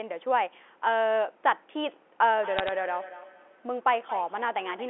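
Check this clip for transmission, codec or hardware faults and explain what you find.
Two faults are audible, both in the later part of the clip.

From 2.35 s to the end there is feedback echo between two devices. A second device in the room replays the call into a microphone whose canceller ignores it, so the speech returns about every fifth of a second, thin and ringing, peaking about 15 dB below it.

From 2.59 to 2.69 s there are bit errors on a digital phone line. A small fraction of bits flipped in transit, each corrupting one sample, giving a brief burst of sharp ticks and crackle.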